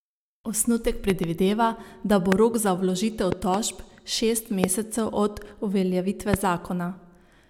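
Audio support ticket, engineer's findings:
Loud pops over continuous speech: double pops at 1.10–1.26 s and 3.32–3.56 s, single pops at 2.32–2.34 s, 4.64–4.66 s and 6.34–6.36 s. Peaks sit about 15 to 20 dB above the speech. Likely a voltage spike from a connector, switch, static discharge or driver glitch. Downstream circuitry shapes each pulse. Waveform shows isolated tall spikes; spectrogram shows thin full-band vertical lines, with the speech continuing underneath.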